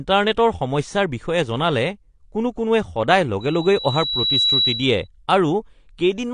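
From start to end, the speech is dull and smeared, with nothing above 10.1 kHz and a warbling, fizzy texture on sibilants. This points to likely AAC compression at a low bitrate, near 32 kbps. A plain low-pass filter would dull it without that shifting texture.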